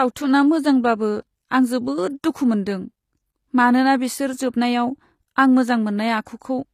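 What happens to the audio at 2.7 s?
At 2.7 s the speech carries the clip-wide gritty, lispy treble of likely HE-AAC compression, with replicated rather than missing highs up to 14.9 kHz, unlike a plain low-pass.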